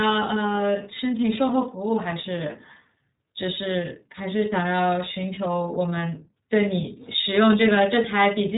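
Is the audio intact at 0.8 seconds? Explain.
No. At 0.8 s the iLBC codec's damage runs throughout: speech sounds rough and synthetic, coded in independent 30 ms frames, and a spectrogram shows nothing above 3.8 kHz.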